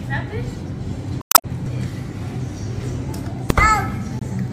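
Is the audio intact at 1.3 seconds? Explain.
No. From 1.19 to 1.45 s, 1.3 s falls inside damaged data in a compressed stream. Corrupted bytes there cause the decoder to misread its frames, lose sync and hunt for the next valid frame header, so that quarter-second comes out as a chirp, squawk, click or short hole.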